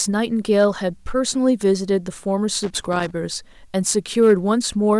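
From 2.63 to 3.11 s there's loose connector crackle: a worn or dirty contact somewhere in the chain is making and breaking as it shifts, chopping the speech apart, so you get a ragged, irregular scratchy burst. Then from 3.91 to 4.34 s comes hard clipping, with the level pushed about 3 dB past what a stage could pass. The peaks get sliced flat, and those squared-off tops add high harmonics, giving a gritty, crackly edge on the loudest moments of the speech.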